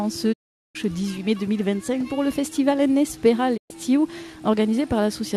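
Digital broadcast dropouts fade the sound to silence within 20 ms, at 0.32–0.77 s and 3.56–3.72 s. The receiver muted on bad frames, and that audio is lost.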